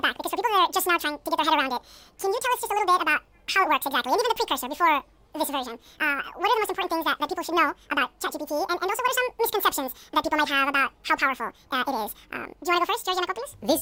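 From start to finish the speech plays at twice its proper rate and a full octave (12 semitones) high, the signature of audio read two samples at a time: each pair of samples was treated as one frame. Timing halves, giving a chipmunk-like rush. A spectrogram shows every harmonic and formant stretched upward to double frequency; the waveform looks horizontally compressed.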